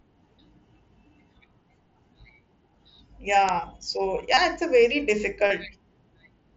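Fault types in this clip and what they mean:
Uninitialised buffer: playback read a block of memory before any audio had been written to it, so stale data came out as samples. At 3.49 s this gives a sub-millisecond loud crack, which fits a 32-sample buffer.
Concealed Bluetooth headset packet loss: headset voice packets went missing, and the receiver filled each gap by repeating the best-matching recent waveform. Two 30 ms gaps, just before and just after "it's a very", sound like brief buzzy held tones that warble slightly on recovery.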